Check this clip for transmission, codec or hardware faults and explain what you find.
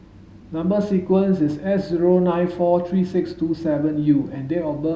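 Listening through the whole of this speech, I can't hear anything that points to a problem anywhere along the chain, so there's nothing to flag here.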